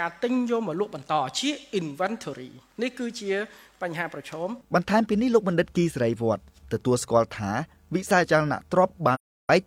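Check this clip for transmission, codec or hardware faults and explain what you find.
One codec fault is present. AAC frame loss with muting, 9.14 to 9.50 s: lost frames were decoded as silence, so the overlapping windows fade the sound smoothly into a roughly 340 ms hole and back out.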